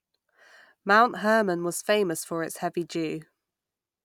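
No faults detected anywhere in the speech; nothing to flag.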